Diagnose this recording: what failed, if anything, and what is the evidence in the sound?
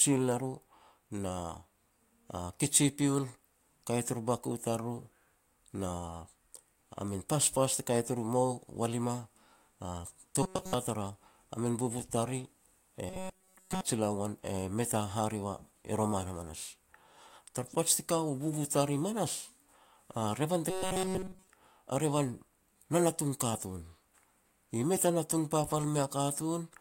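Robotic sound from repeated short buffers, at 10.43–10.74 s, 13.09–13.81 s and 20.70–21.47 s, points to a failure at the driver or buffer stage. Each stretch becomes a rigid metallic buzz at 188 Hz. On the waveform, identical cycles of about 5.3 ms repeat. The spectrogram shows flat horizontal stripes at multiples of 188 Hz. Most of the first stretch and all of the later two are repeated. Audio likely arrived late, so the last short block was looped while the real signal was skipped.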